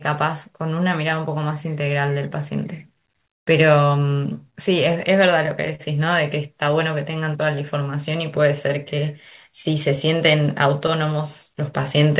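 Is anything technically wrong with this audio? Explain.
Yes. The speech has clock drift, repeated timing corrections and scattered short gaps, all over a call path whose narrowband coding leaves nothing above 4 kHz, which fits G.711 mu-law at 64 kbps.

Clock drift between sender and receiver runs through the whole clip. The sender's clock runs roughly 3% slower than the receiver's, so the jitter buffer keeps draining and the receiver must keep padding the stream to stay in step, causing small, uneven timing hiccups.

Repeated timing corrections span 0.81 to 11.45 s. The receiver stretches playback to 98% speed by repeating short pieces, adding a couple of hundred milliseconds overall. The edits all lengthen the sound at irregular spacing, heard as a faintly unsteady, dragging tempo.

Scattered short gaps appear from 4.89 to 5.82 s and from 8.36 to 11.87 s. Packets went missing in ones. 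The receiver filled each hole by extending the preceding sound: about three fills in the first stretch, the longest around 40 ms, and about seven much briefer ones later. These come across as brief ticks and smears.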